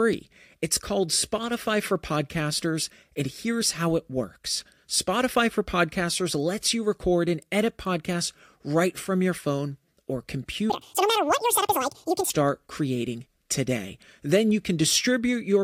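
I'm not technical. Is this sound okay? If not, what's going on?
No. Just after "from your phone or", from 10.70 to 12.30 s, the speech suddenly runs twice as fast and an octave higher. This is audio read two samples at a time (double speed). The playback treats each pair of samples as one step, so everything plays too quickly.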